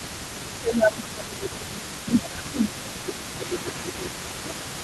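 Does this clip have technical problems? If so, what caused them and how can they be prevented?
Yes. The first fault is an echo leak: the far end was likely playing the call over a loudspeaker, and its echo canceller failed to remove what its microphone picked back up, so that residue was returned down the line. Throughout the clip a faint delayed copy of the speech trails the original by about 236 ms, sitting roughly 20 dB below it. Using a headset, or reducing loudspeaker volume and keeping a well-tuned echo canceller active, prevents this.

The second fault is speech suppressed in double talk. While both sides spoke at once, the echo canceller likely could not tell its own talker apart from the loudspeaker echo and attenuated everything. From 0.55 s to 4.56 s the speech dips and fades, falling by around 20 dB at its deepest, for about four seconds in total. An echo canceller with proper double-talk detection, or a headset that removes the echo path entirely, prevents this.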